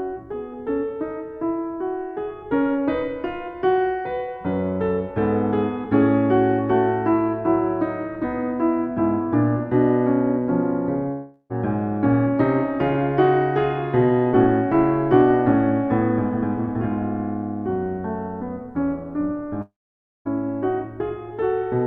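At 11.11 to 11.52 s and again at 19.62 to 20.27 s, the music dissolves into a fading buzz, then silence (about 0.54 s the second time), and resumes further on: a likely long network dropout.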